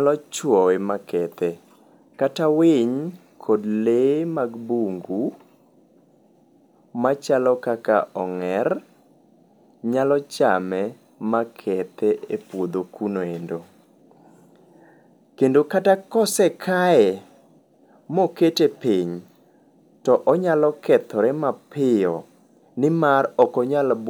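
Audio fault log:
The speech signal keeps a steady level and unbroken continuity throughout, with nothing audible that departs from normal playback.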